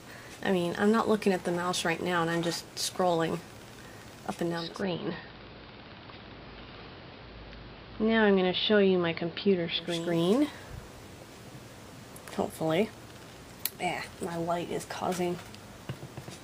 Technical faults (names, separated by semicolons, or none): digital radio blending to analogue